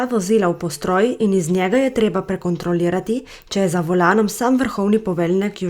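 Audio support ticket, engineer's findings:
No faults heard in the speech audio.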